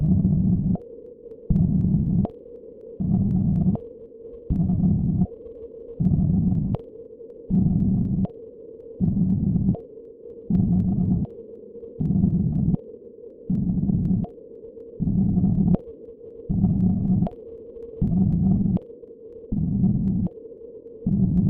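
From 0.06 s to 21.38 s, periodic USB or driver dropouts recur every 0.25 s, roughly a hundred in all. A blocked bus or driver skips about a tenth of a millisecond of audio each time, producing evenly spaced ticks wherever the sound carries signal.

At 16.93 s a repeated frame plays one 24 ms block a second time, adding 24 ms and a brief stutter. At 20.80 s another 24 ms frame plays twice more, adding 48 ms and a stutter.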